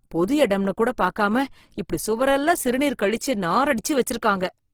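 Speech with Opus compression throughout, sounding grainy and rough, likely from a low-bitrate CELT encode near 16 kbps. A spectrogram shows noise-filled bands extending to 20.3 kHz.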